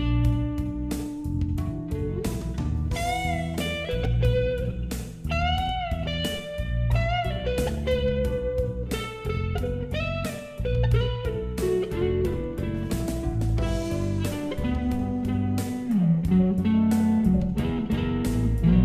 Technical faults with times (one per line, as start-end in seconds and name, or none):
4.04 chunks out of order